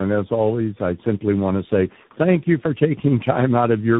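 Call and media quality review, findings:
Tandem speech coding, whole clip. Rough, muffled, warbly speech, nothing above 3.8 kHz. The sound fits three speech coders in series, likely two AMR-NB narrowband hops ending in CVSD. Each coder re-encodes the previous one's output, so the errors stack. Unlike a single low-bitrate codec, this combines AMR-style warble with CVSD-style granular roughness instead of showing one consistent artefact signature.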